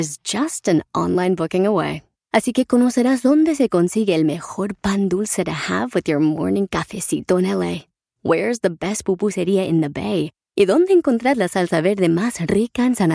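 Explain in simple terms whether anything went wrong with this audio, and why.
Nothing went wrong here: the recording of speech has no technical problems anywhere that a listener would notice.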